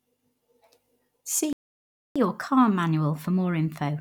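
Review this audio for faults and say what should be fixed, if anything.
The speech cuts out mid-flow at 1.53 s and stays silent until 2.16 s, a gap of about 0.63 s, before resuming where it stopped. This is a playback stall, most likely the player running out of buffered data or its audio thread being blocked.

From 2.16 s to the end, the speech runs fast and sits higher in pitch, by about one and a half semitones. This is catch-up at higher speed: the player resamples its backlog at 1.1x to recover the time lost in the stall.

Fix both by giving the player a deeper buffer and keeping its audio thread unblocked, and by recovering from any remaining stall with time-stretching that preserves pitch rather than plain resampling.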